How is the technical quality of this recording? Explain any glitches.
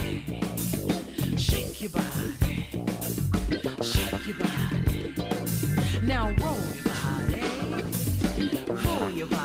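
Nothing stands out here, as I can't hear a single glitch anywhere in the recording, so there's nothing to explain.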